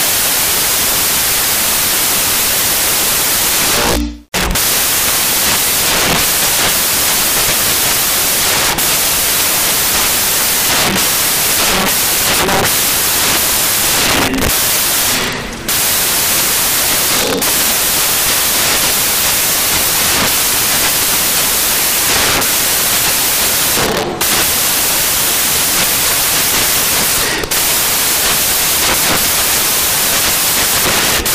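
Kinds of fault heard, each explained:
Samples built from the wrong bytes: The bytes of each sample are combined wrongly throughout. The fast-changing low bits dominate, so the sound becomes broadband noise.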